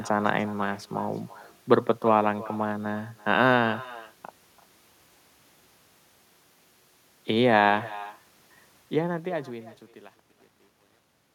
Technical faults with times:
0.00-11.35 echo with no canceller

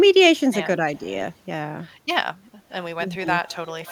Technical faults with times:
0.96-1.00 echo leak
3.16-3.26 speech suppressed in double talk
3.47-3.91 echo leak

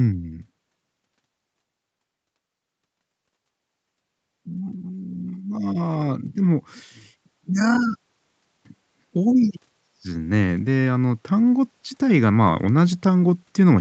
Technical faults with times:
8.96-13.80 automatic gain rising

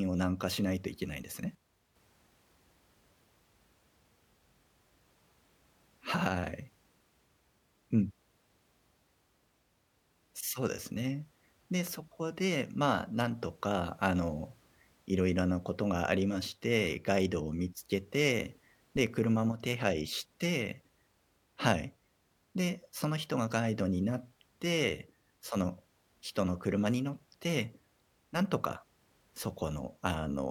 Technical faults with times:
1.55-1.95 one channel drops out
19.52-19.60 one channel drops out
28.66-28.71 one channel drops out

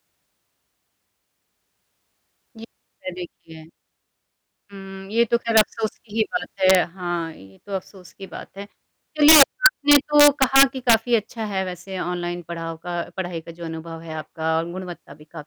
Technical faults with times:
5.57-5.61 integer overflow
6.70-6.75 integer overflow
9.28-10.94 integer overflow

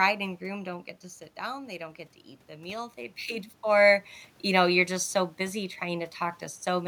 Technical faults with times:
0.43-3.57 automatic gain rising

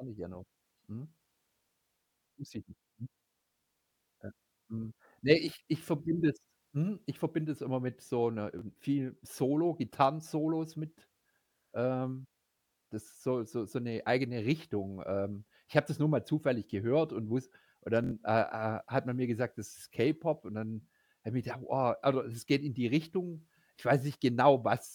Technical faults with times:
8.59-8.61 repeated buffer
18.04-18.11 repeated buffer

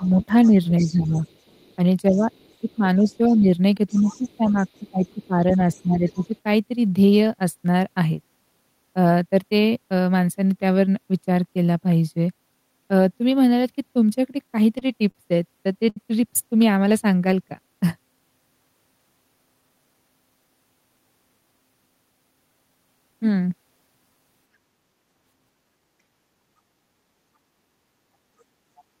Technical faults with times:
0.00-1.18 speech suppressed in double talk
0.04-6.38 other side's voice leaking through
2.10-6.35 speech suppressed in double talk
14.32-15.16 repeated stalls (stutter)
15.89-15.97 short stall from a late packet
28.77-28.84 other side's voice leaking through

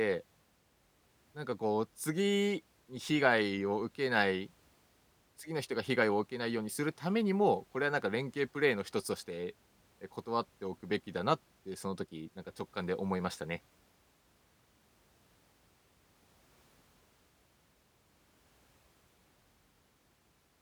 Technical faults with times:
none

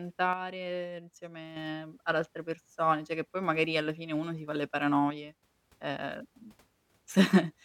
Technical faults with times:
0.33-1.56 one channel drops out
5.10-5.43 one channel drops out

